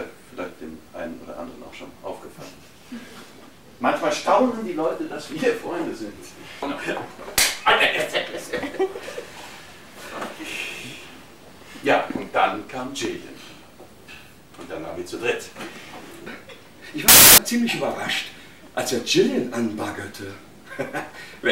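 A short audio clip with one burst of samples built from the wrong bytes, 17.08 to 17.38 s: misassembled bytes put the fast-changing low bits on top, giving loud, harsh broadband noise.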